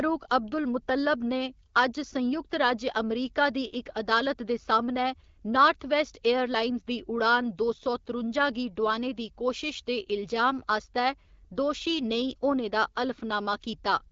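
Speech carried over an AMR wideband (HD Voice) link whose light coding character fits a rate around 12.65 kbit/s, with no faults to report.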